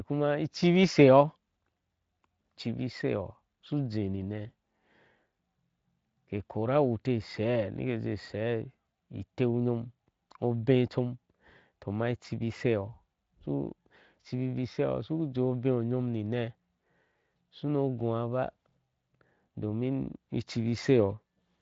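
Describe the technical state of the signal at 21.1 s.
At 21.1 s the speech is intact, with no fault present at that moment.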